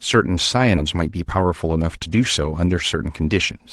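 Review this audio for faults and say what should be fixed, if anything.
At 0.77 to 0.79 s the speech abruptly jumps forward with no gap. This skip ahead dropped roughly 0.7 s of audio.

From 0.81 to 3.50 s the speech sounds hurried, running at 113% with unchanged pitch. This is a jitter buffer speed-up that removes repeated pitch-period slices, roughly 0.4 s in total, to shrink excess delay.

To prevent both, let the jitter buffer absorb late packet bursts with gradual time-compression instead of discarding a large chunk and then accelerating.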